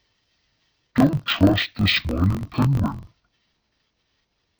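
A speech clip where interleaved stereo has been read as planar throughout: each block of about 21.3 ms, which fits a 1024-sample block, plays its left and right halves at half speed, so the voice sits an octave low, sounds doubled and choppy, with a 46.9 Hz chop.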